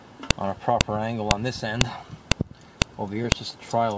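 Sharp clicks land at 0.31, 0.81, 1.31, 1.81, 2.32, 2.82 and 3.32 s, every 0.5 s. This is a file header played as audio. Each joined piece kept its header bytes.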